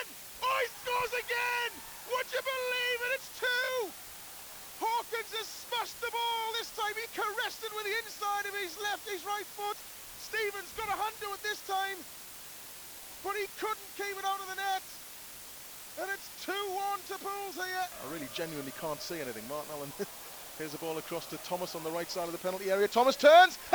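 It's low bit depth with dither, start to finish: a steady, even hiss about 15 dB under the sound, no grit, which fits a 7-bit word with dither.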